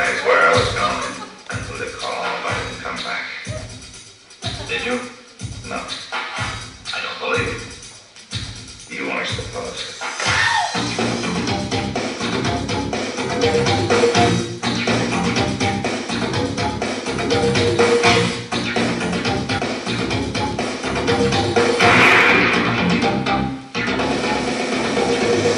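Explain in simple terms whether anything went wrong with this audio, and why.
One fault, at about 19.58 s: damaged data in a compressed stream. A tiny piece of the compressed file was corrupted, so the decoder couldn't make sense of the bytes at that spot. It lost track of where it was and had to search for the next clean starting point before it could carry on. To the ear, that hiccup is a very brief chirp or blip lasting under 20 milliseconds.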